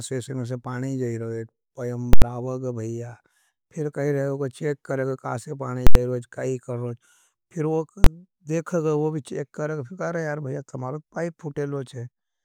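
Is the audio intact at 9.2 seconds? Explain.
Yes, the audio is intact at 9.2 seconds, with no dropout, click, distortion or other technical fault audible at that point.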